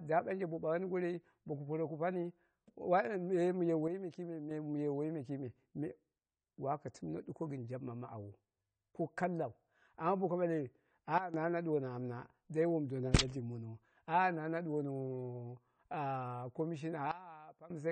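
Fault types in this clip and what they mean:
AAC compression: the speech sounds dull and smeared, with nothing above 9.2 kHz, likely from low-bitrate AAC coding at something like 32 kbps.
Sudden gain jump: level and background noise drop together three times, by about 6, 12 and 18 dB, likely a gain change applied with no ramp.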